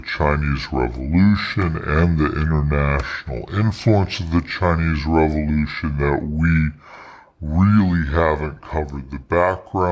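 From start to end the speech runs at two-thirds speed and about seven semitones low, a wrong sample rate fault. It fits 24 kHz audio played at 16 kHz without conversion. On a spectrogram every harmonic and formant sits compressed downward, and the waveform looks stretched in time.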